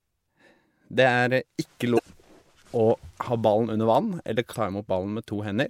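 At 1.95 to 2.00 s and again at 4.51 to 4.55 s, damaged data in the compressed stream throws the decoder off sync, leaving a brief chirp, squawk, click or short hole each time.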